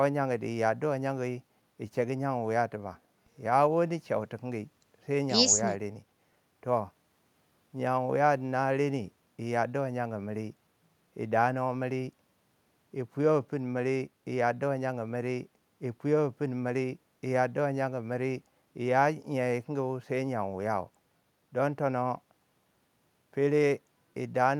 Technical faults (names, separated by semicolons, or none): none